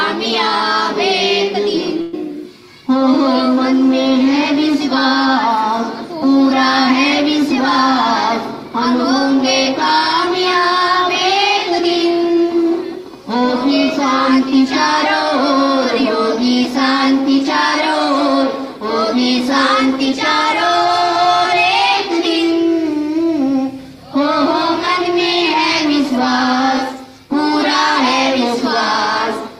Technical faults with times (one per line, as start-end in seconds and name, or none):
2.01-2.15 burst of packet loss